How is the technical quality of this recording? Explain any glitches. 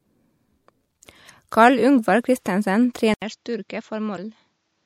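The recording has two audible faults, both in its last two seconds.

From 3.14 s to the end, after an 80 ms silence, the sound turns duller and about 10 dB quieter. This is likely an input switched to a poorer device. A spectrogram shows nothing above 7.6 kHz, with new background noise roughly 45 dB down.

Between 4.14 and 4.19 s there is damaged data in the compressed stream. The decoder misreads the frames and resyncs, which produces a brief glitch. It appears as a brief broadband smear on the spectrogram and a discontinuity in the waveform.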